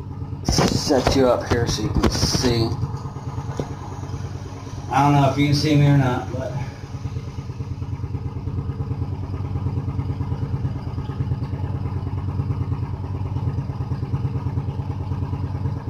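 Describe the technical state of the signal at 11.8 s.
At 11.8 s the signal is intact, with no audible fault at that moment.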